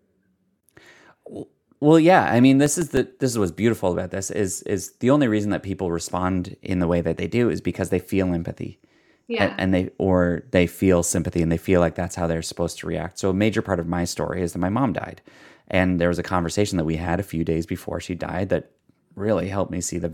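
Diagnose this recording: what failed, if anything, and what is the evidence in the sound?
The fault is at the storage and playback stage: CD scratch ticks in the speech between 2.51 and 3.43 s. Seven short ticks fall at a steady spacing of roughly seven a second, each no longer than a couple of milliseconds. A blemish on the disc passes the laser once per revolution and corrupts more data than error correction can rebuild, so the player briefly interpolates or mutes those samples. The regular once-per-turn spacing over a bounded stretch sets this apart from random crackle or erratic buffer-underrun clicks.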